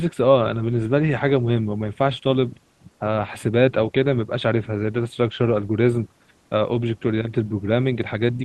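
No technical faults are audible.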